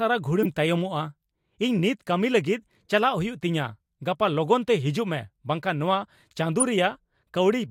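At 0.43 to 0.46 s and 6.60 to 6.63 s, a corrupt frame decoded gives a loud blip of misplaced energy. Damaged compressed data was played anyway, spanning about two frames, then one.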